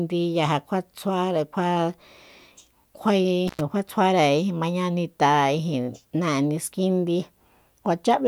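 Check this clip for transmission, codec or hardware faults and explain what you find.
There's one hardware fault here: an intermittent contact at about 3.48 to 3.61 s. For roughly 97 ms the speech just drops out, as if a loose cable or plug briefly lost its connection and then snapped back. You get a little crackle right where the contact breaks and again where it remakes, and in between there's only faint hiss from the open line rather than any signal.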